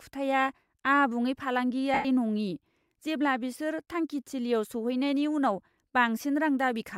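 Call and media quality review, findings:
Lost LE Audio frames, 1.94–2.05 s, before "नङि जेब्ला": speech becomes a noisy smear fading toward silence. Bluetooth LE link dropped 105 ms, fitting 14 frames of 7.5 ms. LC3 concealment repeated the last spectrum with random signs, then attenuated it.

Lossy compression is light and not a fault here.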